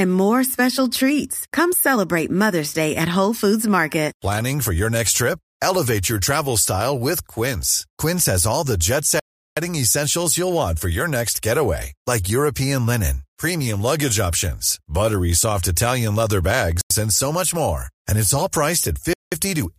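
Blocks of digital silence cut the speech after "has all the jet" from 9.20 to 9.57 s, just before "and so much more" at 16.81–16.90 s, and at 19.13–19.32 s. Unlike concealed dropouts, each hole is plain silence that cuts out and back with no fade. The power-of-two lengths suggest unfilled output buffers.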